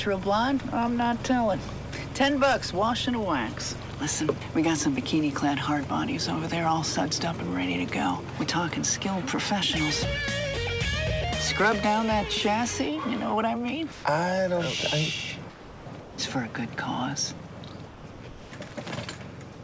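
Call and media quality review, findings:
Sound dropped by the voice detector, 13.92–14.04 s: likely sender VAD misread the sound as background and stopped transmitting; receiver inserted RFC 3389 comfort noise. Symptom: 120 ms stretch replaced by comfort noise, about 70 ms of actual sound lost, then sound resumes when detector re-triggers.

Sound chopped by the voice detector, three bursts: 15.50–16.18 s (540 ms replaced), 17.38–17.50 s (40 ms), 17.88–18.70 s (500 ms). Likely sender VAD toggling send/no-send repeatedly; gaps filled with RFC 3389 comfort noise. Symptom: holes from short edge clip to half-second dropouts.

Call path (G.722 at 64 kbps, band-limited with nothing above 8 kHz) carries these gaps through.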